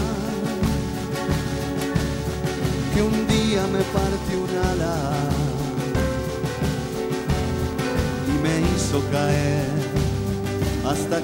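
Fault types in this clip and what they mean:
Train of clicks: irregular ticks about six per second, roughly fifty from 0.02 to 8.94 s, likely a faulty connection or interference; waveform shows spikes about as high as the signal, spectrogram thin vertical lines.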